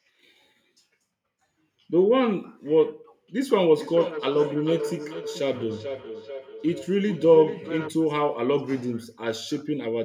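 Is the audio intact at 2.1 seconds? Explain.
Yes, at 2.1 seconds the audio is intact, with no fault audible at that moment.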